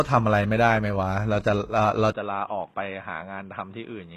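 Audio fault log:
Throughout: HE-AAC compression, likely. Nothing comes through above 12.3 kHz, and the codec damage is plainly audible. The top end sounds rebuilt rather than captured. The encoder keeps only the lower spectrum and fakes the treble by copying lower bands upward under a coarse envelope, so the harmonics don't line up across the join. That fits a low bitrate, somewhere around 16 kbps. The s sounds come out gritty, metallic or lispy.
2.12 to 4.17 s: input switched to a poorer device, likely. There's a short silence of about 20 ms at 2.12 s, and then the speech runs to the end of the clip with nothing above 3.8 kHz, so it goes dull and boxy compared with the first half. The level drops by roughly 10 dB, and a fresh background noise appears around 35 dB under the speech. That points to a different microphone or a headset call profile taking over, with its own narrower band, tone and noise.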